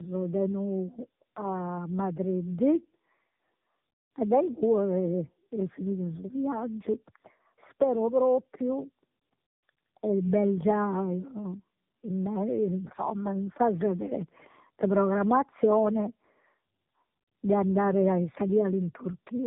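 Tandem speech coding runs through the whole recording. The speech has been squeezed by a low-rate narrowband mobile codec, converted to ordinary telephone-line coding, then squeezed again by the same kind of codec, which fits two passes of AMR-NB at about 8 kbit/s. The second coder rebuilds speech from an already damaged copy, so the errors stack: nothing survives above 3.8 kHz, and the speech sounds muffled, rough and warbly.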